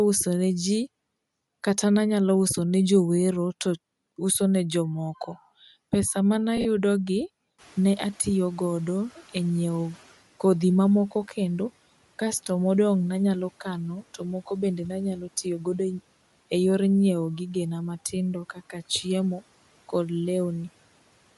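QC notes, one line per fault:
Throughout: Bluetooth LC3 compression. The top end sounds breathy and grainy, with noise standing in for missing detail. This points to an LC3 stream, likely a mid-rate link with 10 ms frames.
6.57 to 6.66 s and 14.48 s: lost LE Audio frames. The first loss scatters about 50 ms of gaps over 80 ms, the longest around 40 ms. The second lasts 30 ms. Each gap is a brief noisy smear where the decoder repeated the last spectrum.
7.58 to 10.18 s: noise suppressor catching up. Room noise jumps about 19 dB near 7.5 s. It passes through at first, then settles about 9 dB lower over 2.6 s as the estimate adapts.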